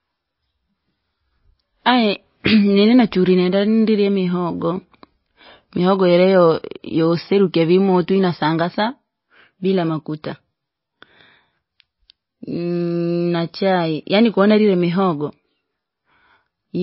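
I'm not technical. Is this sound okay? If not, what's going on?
No. The speech was likely squeezed hard by MP3 compression, which throws away detail to save space. Throughout the clip, everything above 5.6 kHz is missing, so it sounds dull and muffled, with a watery, swirly quality and metallic chirps on s sounds.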